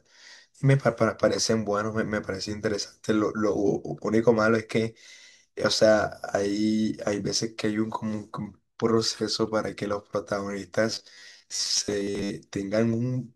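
From 10.90 to 12.30 s, robotic sound from repeated short buffers: the speech becomes a fixed 100 Hz metallic buzz, likely from 10 ms repeats filling roughly half the time, rather than silent dropouts.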